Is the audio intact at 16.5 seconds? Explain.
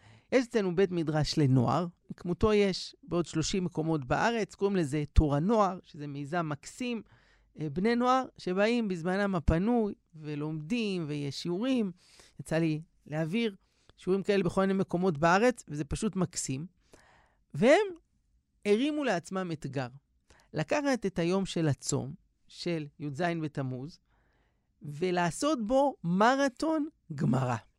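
Yes, the audio is intact at 16.5 seconds, with no fault audible at that moment.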